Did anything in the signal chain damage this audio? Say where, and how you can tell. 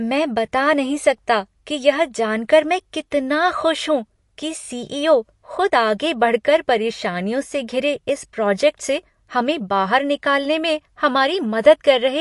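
Yes, at the codec stage, across the whole speech clip: nothing sounds above 11.3 kHz, and the sibilants swirl and chirp as weak bands drop in and out between frames. That points to MP3 compression, likely at a low bitrate near 48 kbps. A plain low-pass filter would cut the top cleanly without this watery flicker.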